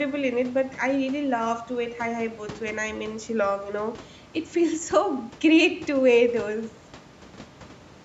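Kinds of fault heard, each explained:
No faults heard in this speech.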